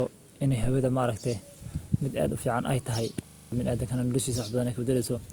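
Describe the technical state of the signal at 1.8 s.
At 1.8 s the speech carries the signature of low-bitrate audio saved at a high bitrate, a condition that runs through the whole clip rather than starting here. The smeared, coarse texture of a lean first encoding remains, likely from an Opus pass around 32 kbit/s later re-saved as MP3 at about 320 kbit/s. Content extends to about 20.1 kHz. Unlike a plain low-bitrate file, the large container adds nothing back; the damage predates it.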